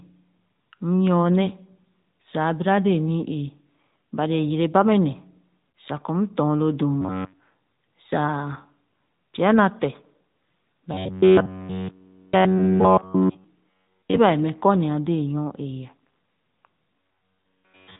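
The whole recording runs through the AMR narrowband mobile codec at 10.2 kbit/s, and you can plainly hear it. Everything above 4 kHz is gone, and the speech has that thin, buzzy, synthetic quality from a vocal-tract model squeezed into so few bits.

At 5.70 s, right after "yere ba mɛ ne" and before "sa kɔ m dɔn", there are lost AMR speech frames. About 40 ms goes missing, which fits two dropped 20 ms frames. The decoder stretches the last good pitch and spectral settings with fading gain, so you get a short dip and warble.

From 7.01 to 7.40 s, just after "m dɔn lo dum", the speech turns into a robotic sound from repeated short buffers. It's a rigid, metallic buzz at 93.8 Hz that still loosely tracks the syllables. That pitch matches a chunk of about 10.7 ms being looped, likely because fresh audio was arriving too slowly. Essentially all of that stretch is repeats. The same buzz comes back from 10.94 to 13.44 s.

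Inside that stretch, at 12.58 s, another lost AMR speech frame costs about 20 ms, adding a brief warbly hole on top of the buzz.

The robotic buzz returns a final time from 17.00 s to the end at about 17.99 s, again at 93.8 Hz.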